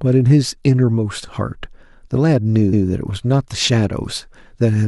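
Speech clip with repeated frames at 2.72 to 2.86 s: a 139 ms block plays twice, stuttering and lengthening the audio by 139 ms, consistent with about six compressed frames being duplicated.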